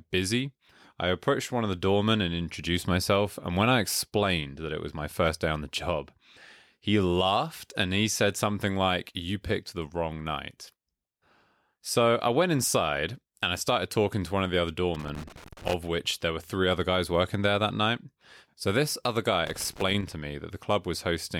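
At 14.94 s, after "one of the other", a burst of loose connector crackle runs until 15.74 s, ending before "which there were three". A second burst follows "this other guy", from 19.47 to 20.12 s. A worn contact is making and breaking. It chops the speech into irregular scratchy crackle.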